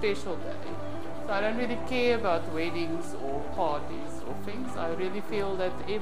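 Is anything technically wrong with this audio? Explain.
Yes. A DC offset runs through the whole clip, shifting the waveform off zero by about -30 dBFS. It is inaudible itself but eats headroom and appears as steady energy at exactly 0 Hz, unlike hum or rumble, which sit at audible low frequencies.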